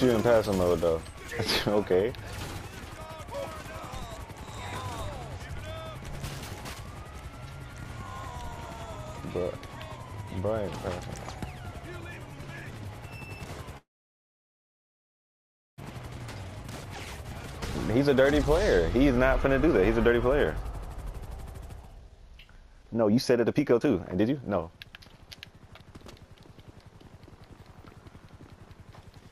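From 13.77 to 15.80 s there is a call audio freeze, most likely because packets were held up in transit and the jitter buffer ran empty. With nothing new to play, the receiver briefly carried the last sound forward and then fell silent for nearly all of the roughly 2-second gap. When playback resumes it continues exactly where it stopped. No audio is lost, but the stream now runs about 2 s behind.

To work off that backlog the receiver then applies jitter buffer speed-up, repeatedly cutting tiny pitch-period-sized slices out of the audio. From 15.90 to 18.56 s playback runs at 108% speed, trimming roughly a fifth of a second. From 18.96 to 26.05 s it runs at 125% speed and removes about 2 s in total. The pitch stays unchanged throughout, but the sound becomes noticeably rushed, most clearly in the second stretch.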